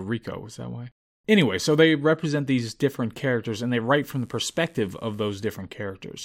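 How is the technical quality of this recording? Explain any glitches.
There's one glitch: a burst of mains buzz from 4.01 to 5.51 s, right after "different characters and they". Something like a dimmer, rectifier or unshielded cable is injecting sharp spikes twice per 50 Hz cycle, with harmonics stretching up into the kilohertz range. You hear a steady, raspy buzz sitting quietly, roughly 40 dB, under the speech.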